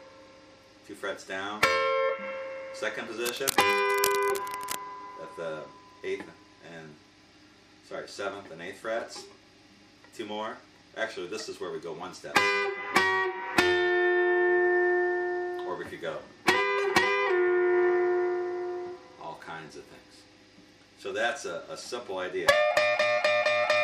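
Cable scratch noise runs from 3.25 to 4.76 s, a burst of ragged scratching and rustling sitting roughly 10 dB under the audio. It is likely caused by a worn cable or connector being moved, its contact resistance fluctuating rapidly and injecting uneven noise.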